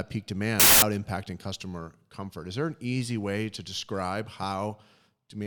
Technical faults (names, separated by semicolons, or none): wrong sample width